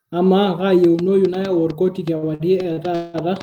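From 0.84 s to the end of the clip, a train of clicks ticks over the speech at about 5.2 per second, spaced irregularly and with much the same shape each time. The pulses peak a few decibels above the speech and are heard in the pauses too. The likely cause is interference or a faulty connection or power supply injecting pulses. On a waveform they show as thin spikes standing above the envelope. A spectrogram shows them as narrow vertical broadband lines.

Between 2.17 s and 3.16 s, repeated stalls (stutter) make the speech drag and hiccup. Packets arrived late six times, so the jitter buffer ran dry and the receiver kept extending the last sound until playback could resume. In total 363 ms were filled this way, about 37% of that stretch, with the longest hold lasting 188 ms. Nothing is lost. On a spectrogram the holds appear as smeared, horizontally stretched patches. The waveform shows repeated cycles fading during the longer gaps.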